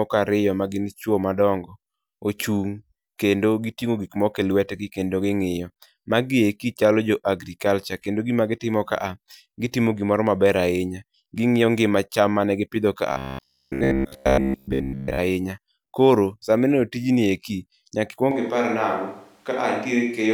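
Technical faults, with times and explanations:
13.12 to 15.19 s: robotic sound from repeated short buffers. The speech turns into a rigid, metallic buzz that still tracks the words loosely. The buzz sits at 66.8 Hz, which fits a chunk of about 15 ms being replayed over and over. Most of this stretch is repeated material rather than fresh audio. The likely cause is new audio arriving too late, so the software loops the last short buffer and skips real sound. The fixed loop length stamps its own buzz on the sound.
18.31 s to the end: switch to a distant microphone. The sound changes abruptly and stays changed. It becomes hollow and roomy, with thinner bass. The level falls by about 5 dB. A faint bed of room noise appears, roughly 40 dB below the speech. The likely cause is the close microphone dropping out and a farther one, such as a camera's, taking over. Distance adds room reflections and removes the close-up low end.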